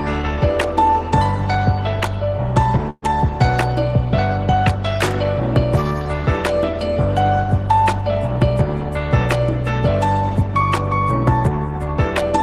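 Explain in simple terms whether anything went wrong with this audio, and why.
A call audio freeze happens from 2.9 to 3.04 s. The audio data was likely held up in transit, so the receiver ran out and stretched the last sound into a fading buzz lasting about 0.12 s, with a brief silence. The audio then resumes where it stopped, with nothing lost.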